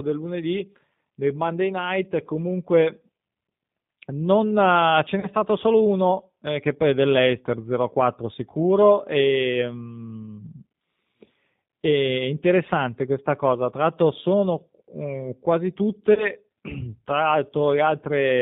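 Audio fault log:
throughout: G.729 codec. The speech has the rough, slightly synthetic grain of an 8 kbit/s model-based coder that rebuilds each 10 ms frame from a vocal tract filter, a pitch predictor and a few pulses. Nothing above 4 kHz survives, so sibilants are dull and the damage is plainly audible. Unlike a plain low-pass or a transform codec's swirling artefacts, this is a buzzy, coarse texture within the voice itself.
5.20–5.28 s, 16.14–16.28 s: VoIP packet loss concealed by the speech codec. Each event loses about 30 ms of audio, the first coming right after "uh ce" and before "stato solo uno eh". The decoder stretches its last pitch and filter into a fading sound, and the voice stays weak for a moment after packets return because each frame builds on the previous one. Unlike a dropout, there is no silence and no click.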